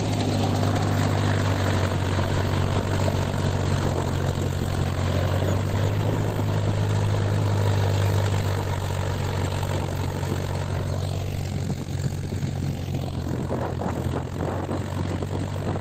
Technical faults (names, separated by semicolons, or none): none